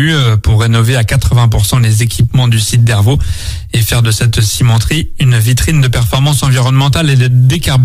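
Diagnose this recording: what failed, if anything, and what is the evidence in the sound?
No fault found in this recording.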